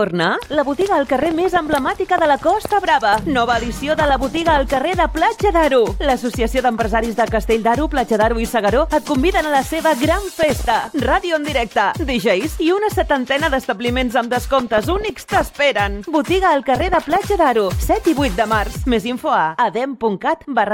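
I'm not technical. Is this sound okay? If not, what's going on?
No. From 14.59 to 15.58 s there is DAB burbling: weak digital radio reception corrupted the audio data, producing bubbling, chirping squelches over the sound.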